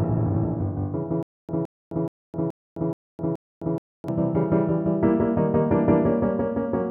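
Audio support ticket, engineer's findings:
Stutter with silent gaps, 1.23 s to 4.08 s. The same short burst of about 165 ms repeats 6 times, each followed by about 260 ms of digital silence, so the cycle is even at roughly 425 ms. Likely cause: the player or stream stalled, replayed its last buffered fragment on each retry, then ran dry. Audio due in that span is missing, not delayed.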